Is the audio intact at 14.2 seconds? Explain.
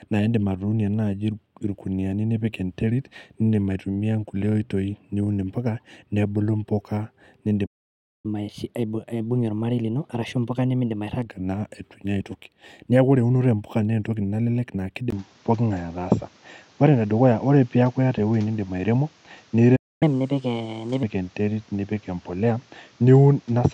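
Yes, the speech at 14.2 seconds plays through intact, with no dropout, click, distortion or other fault at that point.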